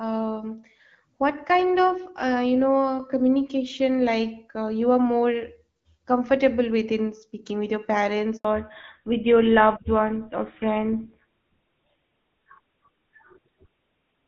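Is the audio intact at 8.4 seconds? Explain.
No, right at 8.4 seconds there's a handover gap. From 8.37 to 8.45 s the audio simply drops out for about 80 ms: the call was being passed from one network to another, and no speech frames made it through during the switch. You hear the voice cut away almost instantly into dead silence, and whatever was said in that slice is gone for good rather than just muffled.

When the sound comes back at 8.45 s, it's changed character. That's the fallback to narrowband, and it holds through to the end of the clip. Before the gap the audio has the fuller, airier top end you'd expect from wideband HD Voice, with only light codec damage. Afterward, nothing above 4 kHz survives, so the speech goes duller and grittier, which fits the call landing on an older narrowband codec like GSM full rate.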